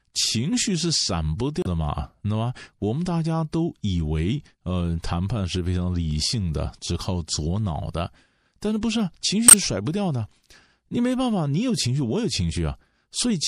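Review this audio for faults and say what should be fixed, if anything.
The speech carries MP3 compression damage from start to finish, most likely from an encode at a low bitrate; the degree of smearing fits roughly 64 kbps. The artefacts are plainly audible. With too few bits, the encoder drops the upper treble above a fixed cutoff and discards quieter spectral detail, so the sound turns watery and swirly, sibilants pick up a metallic chirp, and consonant onsets blur. To prevent this, keep a lossless or high-bitrate master and encode at a higher rate.

There are two short bursts of damaged data in a compressed stream, at 1.61 to 1.67 s and at 9.48 to 9.54 s. Each is a brief squawk or blip. Corrupted bytes in the encoded stream make the decoder misread or reject those frames, lose synchronisation, and jump ahead to the next valid frame header. To prevent it, transfer and store the file with checksums, and re-fetch it from an intact copy before decoding.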